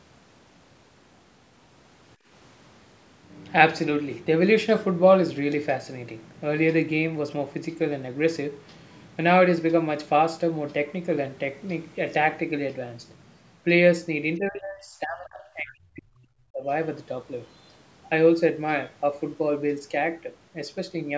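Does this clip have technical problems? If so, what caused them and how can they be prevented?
Yes. From 2.16 to 2.28 s the room background drops by about 15 dB for roughly a tenth of a second, then comes back. This is background gated by the echo canceller: while far-end audio was playing through the loudspeaker, the canceller's suppressor clamped the microphone path, taking the ambient sound down with the echo, and released once playback ended. Retuning the suppressor for gentler attenuation, or adding comfort noise during suppression, would prevent the audible gap.

From 14.37 to 16.69 s the talker's speech is pushed far down, at its deepest by around 40 dB, over about two seconds in total. The likely cause is speech suppressed in double talk: with both ends talking at once, the echo canceller could not tell the near-end voice from loudspeaker echo and attenuated everything on the microphone path. 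Better double-talk detection and a well-converged adaptive filter, so less residual suppression is needed, would prevent this. The band limit at 8 kHz comes from the call's normal microphone processing and is not a fault.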